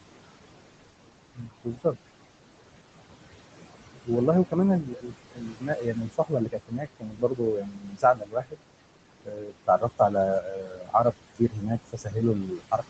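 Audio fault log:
throughout, noise suppressor artifacts: The room noise sits only about 11 dB under the speech, so the suppressor pushes it down hard, about 21 dB, working band by band on each short frame. You hear the background drop away in the gaps and climb back up under the speech. The voice sits in a band that stops at 8 kHz, consistent with a low-bitrate wideband call codec.
1.35–1.96 s, 4.82–5.14 s, 5.31–8.6 s, 9.24–10.15 s, 10.42–11.71 s, 11.92 s to the end, speech cut by the noise suppressor: In each of these stretches the suppressor mistakes quieter parts of the speech for noise and turns them down along with the background. The drops reach about 21, 16, 22, 22, 21 and 19 dB. Soft consonants and trailing syllables sound swallowed or faint. The long 5.31–8.6 s stretch is the worst, with something like three seconds of it dipping in and out.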